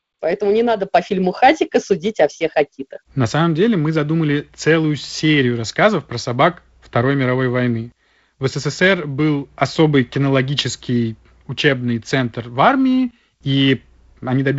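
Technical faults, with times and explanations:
Nothing here counts as a technical fault; the speech just carries the sound of G.722 wideband telephone coding at 48 kbit/s, with nothing above about 7.7 kHz and a light grain from the coding, which is simply how that path sounds.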